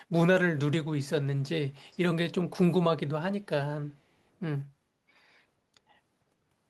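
At 1.91 to 1.98 s there is a brief echo leak. A very faint, delayed copy of the speech returns about 474 ms late, far below the talker. The likely cause is a loudspeaker on the far end whose echo canceller let a scrap through.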